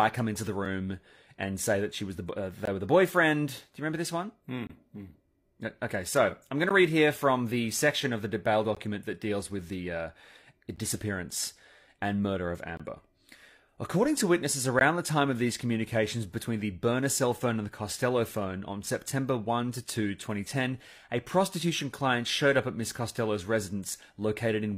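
Gaps between stream segments fall every 2 s in the speech, at 0.65, 2.65, 4.67, 6.69, 8.75, 10.76, 12.77 and 14.79 s. One of them falls between "she was the uh" and "were the boyfriend", and another between "section of the bail" and "that deals with the". Mismatched segment timestamps leave holes that are filled with silence, lasting from about 4 ms up to 25 ms. They sound like abrupt, hard-edged dropouts. The waveform flatlines and the spectrogram shows thin, empty vertical columns at those points.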